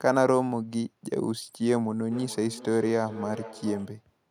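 Feedback echo between two devices runs from 2.12 s to 4.05 s: a second device in the room replays the speech, and its microphone sends it back around the loop. The sound returns roughly every 0.4 s, at most about 14 dB below the speech.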